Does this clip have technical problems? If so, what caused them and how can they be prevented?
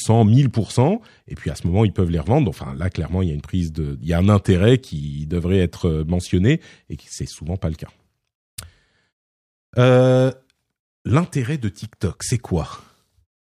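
No, the speech signal comes through intact, with no technical fault to be heard anywhere in the recording and so nothing that needs preventing.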